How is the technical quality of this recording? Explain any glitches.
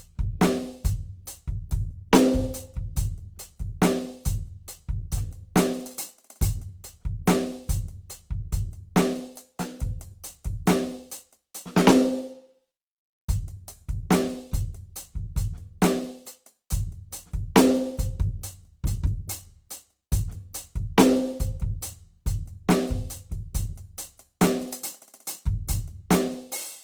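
The music carries plainly audible codec damage from start to finish. The damage sounds like Opus compression, which would likely explain it. Tones come across noisy, rough and grainy rather than clean. The encoder stays in its CELT music mode and keeps the full bandwidth up to about 20.2 kHz. It preserves each band's energy but, short of bits, fills band detail by folding lower bands or injecting noise. That graininess fits a low bitrate around 24 kbps.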